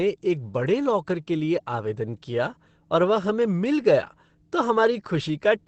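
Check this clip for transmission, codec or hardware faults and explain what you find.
There's one problem, and it runs the whole way through. This speech sounds muffled and hoarse, with nothing above 8.6 kHz, likely Opus compression in its speech mode squeezing a low bitrate, around 12 kbps.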